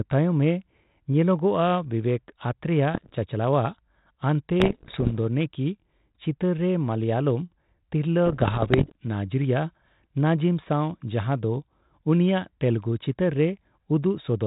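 Pops and rough bursts with brief level jumps at 2.94–3.13 s, 4.60–5.16 s and 8.26–8.92 s: bit errors on an ADPCM link, each one throwing off the decoder's step size so the damage rings on briefly.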